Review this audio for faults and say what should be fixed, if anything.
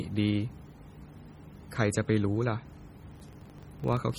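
The speech throughout has a heavily watery, swirling texture, with smeared consonant onsets and chirpy sibilants, likely from MP3 compression at a low bitrate near 32 kbps that starves weak frequency lines so they flicker between frames. Encode at a higher bitrate or keep a lossless source.

From 3.12 s to the end, a buzz at 23.4 Hz tracks the speech level. This points to a filter restarted on every block, each block opening with a small transient at a rate that fits 2048-sample blocks. Carry filter state across block boundaries instead of resetting it.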